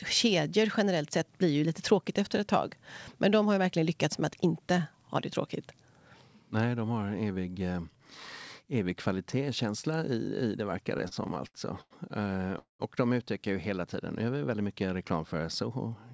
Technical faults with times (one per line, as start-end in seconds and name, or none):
10.85-11.93 repeated stalls (stutter)
12.59-12.82 call audio freeze
15.62-16.12 jitter buffer speed-up